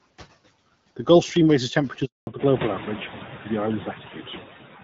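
A short speech recording with three faults. Noise suppressor artifacts run throughout. Background noise is pulled down by about 12 dB between words and swells back under them, showing on a spectrogram as flickering, patchy noise bands, which is most noticeable once the room noise rises at around 2.5 s. At 2.05 to 2.27 s a handover gap leaves 220 ms of flat silence, a clean hole in the waveform where no speech frames arrived while the call switched networks. From 2.27 s to the end there is a fallback to narrowband. The spectrogram goes empty above 4 kHz and the speech turns duller, which fits a drop from AMR-WB to AMR-NB at around 12.2 kbit/s.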